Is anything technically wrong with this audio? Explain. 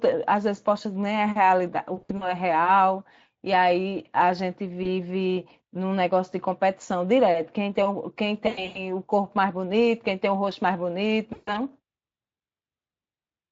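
Yes. Around 2.01 to 2.32 s, 4.83 to 4.87 s, 8.47 to 8.87 s and 11.33 to 11.53 s, the speech smears into a buzzy, fading tone and stays weak briefly afterwards. This is VoIP packet loss concealed by the speech codec: the decoder stretched its last pitch and filter across missing packets, 100 ms in a row near 8.5 s and up to 140 ms in a row near 11.3 s, lowering the gain until real audio returned.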